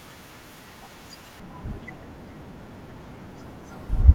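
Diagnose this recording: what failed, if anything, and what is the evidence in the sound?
A de-emphasis filter was applied wrongly in playback from 1.40 s onward, sloping the treble about 11 dB down at 10 kHz, muffling the speech.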